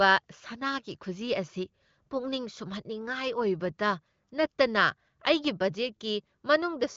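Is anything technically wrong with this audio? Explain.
No, nothing is technically wrong: this speech has the band-limited character of AMR wideband (HD Voice) coding, with no content above about 7.4 kHz and clarity that fits a higher rate such as 18.25 kbit/s.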